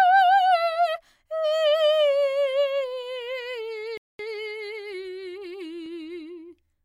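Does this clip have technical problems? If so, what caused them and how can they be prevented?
Yes. A playback stall, likely from the player running out of buffered data or its thread being blocked, silences the music from 3.97 to 4.19 s, roughly 0.22 s. A larger playback buffer and a higher-priority audio thread would prevent it.

Time-compressed catch-up follows as the player trims its backlog by cutting and cross-fading small pieces, so from 4.19 to 5.05 s the music runs 1.25 times fast at unchanged pitch. Avoiding the stall removes the need to catch up, or the player could resume with a small jump instead.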